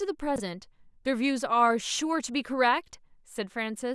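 A 20 ms chunk of this speech recording reached the output one slot late, so between 0.36 and 0.40 s two neighbouring chunks play in swapped order. That is the chunks out of order fault. No audio is lost, but the waveform is spliced at three hard joins in quick succession. The result is a brief garbled, jumbled blip rather than a gap or dropout.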